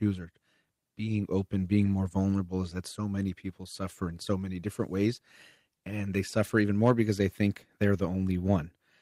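At 1.81 to 1.87 s, after "being open", the speech roughens briefly: a lost packet rebuilt from error correction, fitting two lost packets. Later packets carried low-bitrate copies, so no gap. At 4.09 to 4.11 s, after "so many people suffer", one more rebuilt frame sounds noisier.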